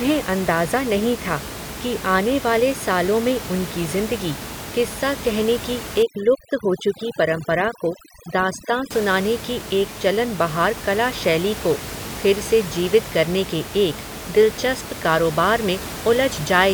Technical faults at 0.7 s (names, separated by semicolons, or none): none